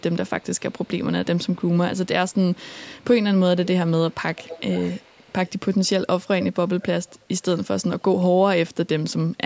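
Speech with an echo leak: a delayed copy trails the speech at 0–0.89, 1.49–1.97, 2.29–2.57, 3.00–3.04, 4.1–5.51, 6.24–7.16 and 7.56–7.65 s. It lags 381 ms early on and 435 ms from 4.1 s, and is loudest at 6.24–7.16 s. This is likely the far end's echo canceller missing part of its loudspeaker pickup.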